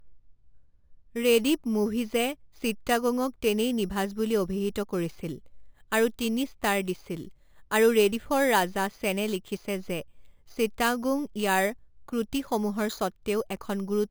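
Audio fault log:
Throughout, imaging from sample-and-hold upsampling: samples were repeated without smoothing, so mirrored copies of the speech spectrum appear, the first spanning 5.5 to 11 kHz at about 17 dB down, a metallic fizz tracking the speech; fits an 11 kHz source raised to 44.1 kHz.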